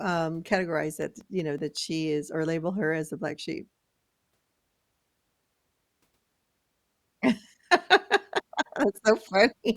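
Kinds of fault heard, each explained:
CD scratch ticks: A mark on the disc spoils more data than error correction can rebuild. The player then patches or mutes the damaged samples. The fault returns once per revolution of the disc. Here it is heard as five short ticks in the speech, between 1.02 and 1.77 s. They come at a steady rate of about five per second. Each is very brief, the longest only a few milliseconds.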